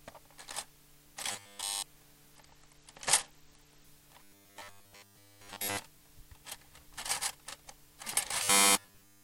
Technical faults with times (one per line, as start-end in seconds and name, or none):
1.32-1.85 robotic sound from repeated short buffers
2.35-3.84 Bluetooth SBC bit pool drop
4.23-5.79 robotic sound from repeated short buffers
8.43-9.23 robotic sound from repeated short buffers